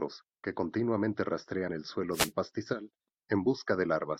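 Just after "que continuamente", from 1.67 to 1.70 s, the speech skips forward. This is likely a broken MP3 bit reservoir. Frames were lost, and the next frame drew its borrowed bits from the wrong data. The gap fits about one 24 ms frame.

From 2.12 to 2.32 s, a wireless microphone noise hit sweeps through. The FM radio link faded as reflections cancelled. Receiver noise surged up and masked the speech. It sounds like a short swish of static.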